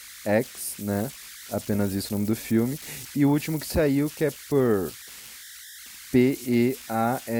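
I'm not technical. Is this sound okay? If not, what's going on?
No. The recording chip has converter idle tones throughout: with quiet input it falls into repeating patterns, adding a high whistle, around 2 kHz, in pauses and grainy noise under the speech.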